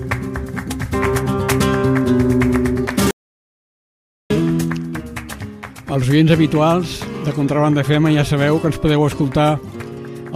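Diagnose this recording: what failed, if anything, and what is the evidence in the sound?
The failure is at the playback stage: a playback stall from 3.11 s to 4.30 s, where the sound cuts off mid-flow and the output stays silent for about 1.19 s before it picks up again. The likely cause is the player running out of buffered data or its output thread being blocked. This differs from a brief dropout or packet loss because a gap over a second long points to the player itself halting, not to a few missing samples.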